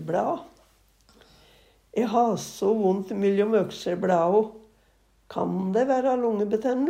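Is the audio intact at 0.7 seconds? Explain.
Yes, the audio is intact at 0.7 s, with no dropout, click, distortion or other fault audible at that moment.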